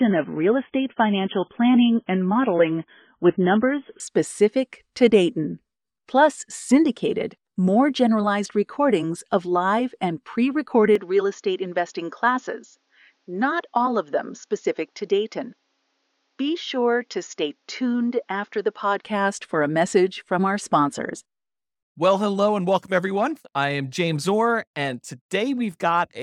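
For the first 4.0 s the speech is thin and smeared, with nothing above 3.5 kHz. This is an adaptive stream starting at a low bitrate: the player opened on a very low-quality version, which sounds like an MP3 at around 16 kbit/s, and then stepped up to one nearer 128 kbit/s. The improvement is sudden and gapless. On a spectrogram the top of the spectrum abruptly fills in at 4.0 s, while the waveform continues unbroken.

From 10.95 s, right after "of live and pre", until 19.04 s, just before "for a message from", the voice turns duller and boxier, with the band cut off at 7 kHz, and drops a few decibels in level. A faint new noise floor sits far below the speech. There is no silence at either transition. The cause is likely an input switched to a poorer device, such as a different or headset microphone. A spectrogram would show a hard ceiling at 7 kHz across that span, and the waveform would show a smaller envelope.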